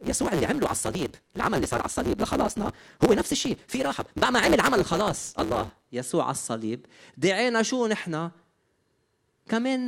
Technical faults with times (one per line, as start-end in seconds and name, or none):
0.00-5.87 block size mismatch (truncated)